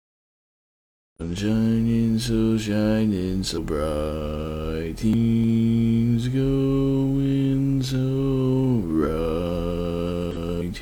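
Three brief glitches break into the audio, from 1.16 to 1.22 s, from 3.53 to 3.59 s and from 10.31 to 10.37 s, each roughly 60 ms long. All three come from damaged data in a compressed stream: a patch of bytes in the encoded file was wrong, so the decoder misread those frames, lost sync and had to hunt for the next valid frame header before clean decoding could resume.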